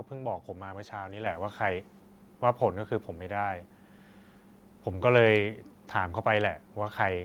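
At 1.26 s the microphone volume steps up. The call software judged the input too quiet and raised the device's input level in a single jump of about 6 dB. The speech and the background noise get louder together, all at once.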